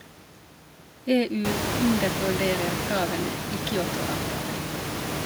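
No technical faults can be heard in the speech. The room noise climbs by about 21 dB around a second and a half in and then sits only about 3 dB below the speech, but that is the room itself and not the system.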